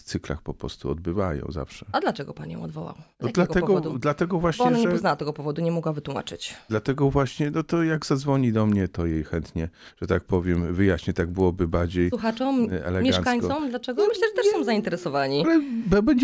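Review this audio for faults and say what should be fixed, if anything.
From 7.3 to 15.3 s, a 20 Hz ticking buzz rides the sound: the resampler restarted on every 50 ms block, leaving an error at each edge.

Keep a single resampler instance running across blocks so that its filter history carries over from each block to the next.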